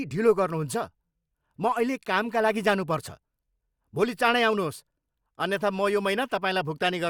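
No technical faults are audible.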